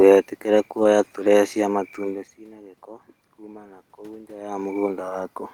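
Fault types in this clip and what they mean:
Lost packet rebuilt from error correction: twice a single packet failed to arrive, but the packet after it carried a low-bitrate spare copy, and the decoder played that copy instead, so the speech never drops out. Each 20 ms patch sounds briefly coarser and noisier than the speech around it. The first is at 0.83 s, just before "turee cia". The second is at 1.95 s, between "turee cia" and "ciĩna gĩko kuma na".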